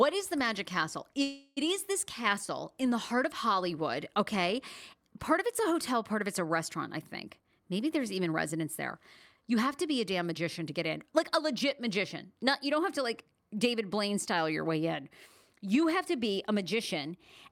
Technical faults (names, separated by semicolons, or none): call audio freeze; jitter buffer speed-up